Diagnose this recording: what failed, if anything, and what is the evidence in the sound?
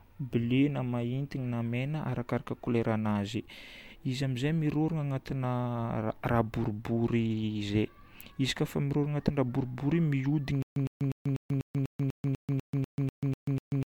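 Stutter with silent gaps from 10.62 s to the end of the speech. A 108 ms fragment repeats 13 times, every 246 ms, with 138 ms of digital silence between repeats. The likely cause is a playback or stream stall: each retry replays the last buffer, then runs empty, and the intended audio is lost.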